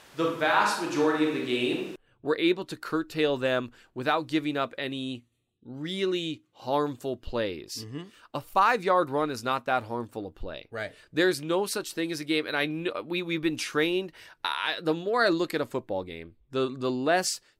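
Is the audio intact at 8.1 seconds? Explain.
Yes, the audio is intact at 8.1 seconds, with the speech continuing there without any audible fault.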